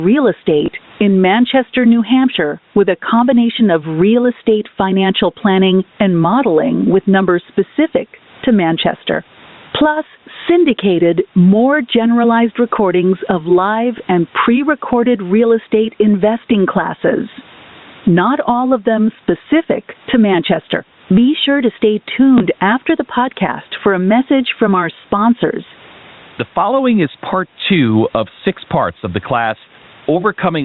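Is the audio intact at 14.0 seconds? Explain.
No. A packet loss with the last packet repeated falls from 13.98 to 14.0 s, between "generalized recordings of live" and "and pre recorded real". One 20 ms packet went missing. The receiver replayed the previous packet in its place. It sounds like a small blip.

Gain pumping also runs through this moment, with a swing of about 20 dB. The likely cause is gain set too high, with a fast limiter pulling it down on every peak.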